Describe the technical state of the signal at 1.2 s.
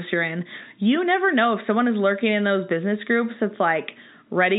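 At 1.2 s the speech is intact, carried through G.711 telephone coding with its band ending near 3.8 kHz and no fault at that moment.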